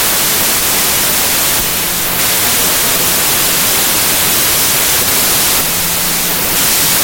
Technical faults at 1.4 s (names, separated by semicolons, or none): wrong sample width